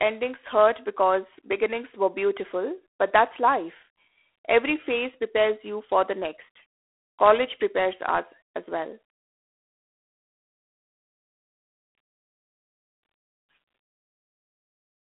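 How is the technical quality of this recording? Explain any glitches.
The technical quality is poor. Throughout, G.726 ADPCM coding adds a harsh, rasping hiss that rises and falls with the speech and nothing passes above 3.8 kHz, which fits the 24 kbit/s rate; level-tracking grit distinguishes it from clean telephone band-limiting.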